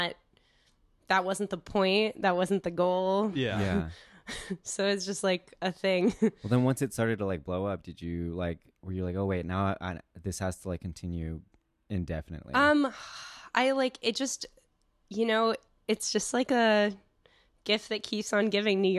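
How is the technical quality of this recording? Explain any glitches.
The technical quality of this recording holds up, with no glitches to explain.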